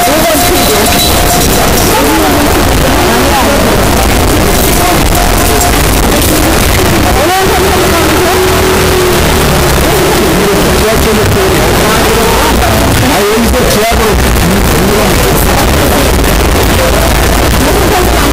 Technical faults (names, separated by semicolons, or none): signed and unsigned mixed up